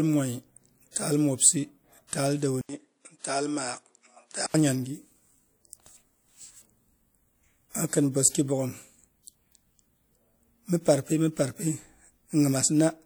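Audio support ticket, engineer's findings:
Pre-echo: short hiss smearing attacks at 0.91 s, before "taal mobsi taal", and 2.07 s, after "taal mobsi"; about 48 and 57 ms. Transform codec spreading block quantisation noise ahead of the attack.

Dull, narrowed sound 2.61–4.54 s, after "taal mobsi taal": 80 ms gap at switch, nothing above 10.5 kHz, level down about 5 dB, new noise floor roughly 55 dB below. Likely input switched to a poorer device.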